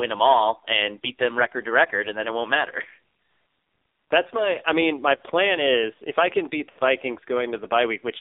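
Speech through the AMR narrowband mobile codec: the spectrogram shows nothing outside 0.3–3.7 kHz, and the buzzy, synthetic timbre fits a low mode near 5.9 kbps. Lost AMR speech frames at 5.16–5.22 s and 6.70–6.79 s (40 and 60 ms, consistent with two and three 20 ms frames) appear as smeared, fading waveform stretches and blurred spectrogram harmonics, as the decoder repeats its last settings at falling gain.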